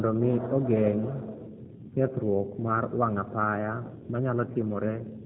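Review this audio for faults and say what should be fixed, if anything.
The whole clip carries G.729 codec damage, plainly audible from start to finish. The speech has been rebuilt from a vocal tract filter, a pitch predictor and sparse pulses, leaving it rough and slightly synthetic, with nothing above 4 kHz, which fits an 8 kbit/s G.729A path. To prevent this, record or route the speech through a wideband or higher-bitrate codec rather than a narrowband VoIP link.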